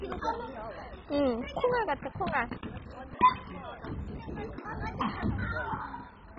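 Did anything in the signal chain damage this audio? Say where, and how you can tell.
Yes, at the codec stage, with likely MP2 compression at a very low bitrate, which fits something near 16 kbps. Throughout, nothing sounds above 7.5 kHz, and the surviving sub-bands flicker and are coarsely quantised, giving a dull, gurgling, granular distortion.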